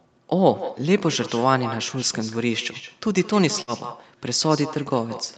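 With no echo canceller at the far end, its loudspeaker leaks into the microphone, so the speech returns roughly a fifth of a second later, about 14 dB quieter and thinner. At 3.61 to 3.70 s, a burst of packet loss makes the receiver stretch the last sound for 60 ms as it fades, then jump ahead, having dropped 60 ms of audio.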